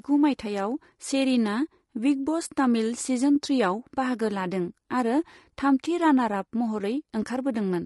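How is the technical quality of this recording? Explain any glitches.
The speech sounds rough and grainy throughout, with noise between harmonics and a dull top band, likely from low-delay AAC compression at a low bitrate, around 32 kbps.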